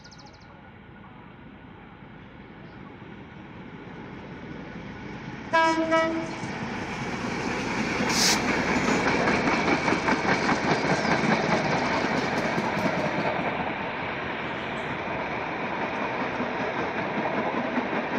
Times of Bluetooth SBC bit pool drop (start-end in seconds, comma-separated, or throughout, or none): 3.95-6.76, 9.03-12.02, 14.97-18.18